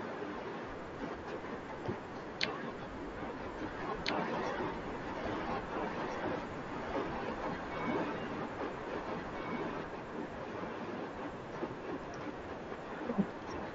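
A doubled audio track runs from 3.72 s to 9.84 s: a second, full-band copy of the speech sits about 5 dB below the original and trails it by roughly a second and a half. It has no reverberant tail or room colouring, and it cuts in and out abruptly at both ends. This is likely a second capture arriving late through a slower path, mixed back in over the original within the 8 kHz band of the headset link.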